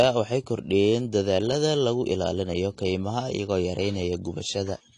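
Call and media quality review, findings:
Speech dull and smeared throughout, nothing above 10.2 kHz. Likely AAC compression, consistent with about 32 kbps, quantising coarsely and dropping high bands.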